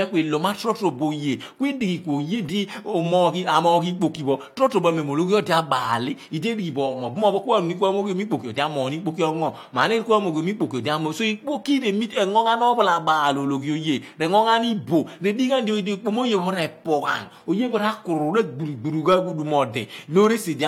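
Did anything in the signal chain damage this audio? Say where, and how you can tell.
No, nothing in the chain from capture through playback has audibly damaged this speech recording.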